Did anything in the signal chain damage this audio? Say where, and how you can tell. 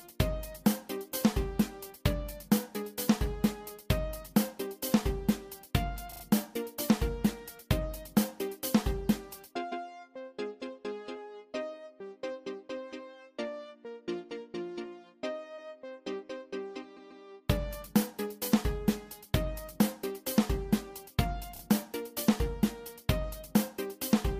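Yes. At the codec or storage stage, runs of compressed frames were written or delivered more than once, so the decoder plays the same short stretch again. These repeated frames cause stutters at 1.12 s, 6.11–6.22 s, 9.71–9.85 s, 15.57–15.71 s, 16.96–17.24 s and 21.55–21.61 s. The repeated slices range from 8.7 ms to 139.3 ms. The 27.6 ms block near 6.1 s plays three extra times, and the 139.3 ms block near 17.0 s plays twice more. The audio runs about 0.74 s longer.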